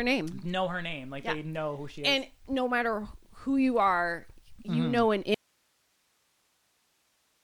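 At 5.34 s the speech cuts abruptly to faint hiss for the rest: an audio dropout to a faint residue, likely from a lost feed.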